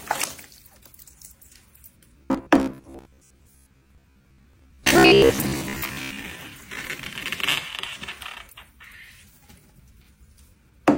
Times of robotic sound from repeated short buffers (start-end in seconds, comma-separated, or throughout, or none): 2.20-6.20